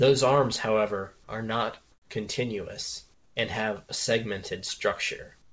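At 1.92–2.10 s (after "arms however are not"), 3.14–3.36 s (after "however are not continuous") and 5.42 s to the end, comfort noise replaces the background: steady, featureless hiss about 6–7 dB quieter, likely from discontinuous transmission during pauses. Nothing is heard above 8 kHz.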